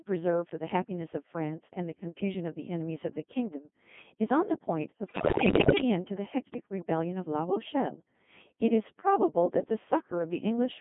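All the way through, the speech runs through a Codec 2 vocoder at 2.4 kbit/s, rebuilt from sine waves in a 150 Hz to 3.5 kHz band, so it sounds heavily robotic and buzzy. From 5.06 to 5.82 s, bit errors on digital voice radio, around one bit in ten, scramble pitch and level into warbling, bleepy gibberish.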